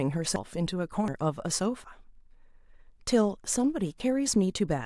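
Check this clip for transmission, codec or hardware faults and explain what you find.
The speech has four abrupt skips at 0.36, 1.08, 1.84 and 4.0 s, most likely dropped buffers (overrun). Each is a jump where roughly a tenth of a second or less of sound vanishes. The sides butt together with no silent gap, unlike an underrun.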